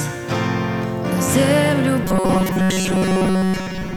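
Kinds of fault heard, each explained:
Robotic sound from repeated short buffers: New audio likely reached playback too seldom, so the software filled each gap by looping its most recent short buffer, about 5 ms long, while the real material was skipped. From 2.04 s to the end, roughly two thirds of the sound is these repeats. Their fixed period stamps a steady 188 Hz buzz over everything, leaving a rigid, metallic drone that only loosely follows the underlying sound.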